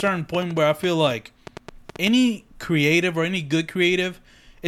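Something, likely interference from nearby equipment or a faulty connection or power supply, was injecting short pulses into the signal from the start of the clip until 2.08 s, just before "creative or any good". The result is a train of clicks, around fifteen of them at roughly 6.8 per second but unevenly spaced, each much the same shape and standing about 5 dB above the speech. They are heard as irregular ticking over the speech and in its pauses.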